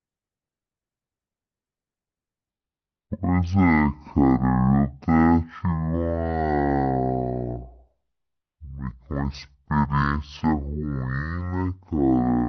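From 2.50 s to the end, the speech plays as a section at the wrong speed, running at about 0.51 times its recorded rate. The voice drops by roughly ten semitones and every syllable drags out to nearly twice its length. This is likely a clock or sample-rate mismatch during editing or playback. Pitch and timing slow together, which sets it apart from a pitch shift, where the voice deepens but keeps its pace.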